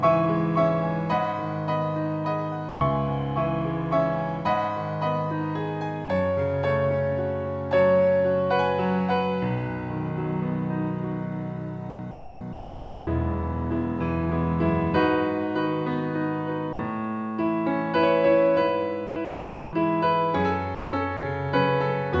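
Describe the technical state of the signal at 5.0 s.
At 5.0 s the signal is intact, with no fault present, only the ordinary band limit of the G.722 call path, which leaves nothing above 8 kHz.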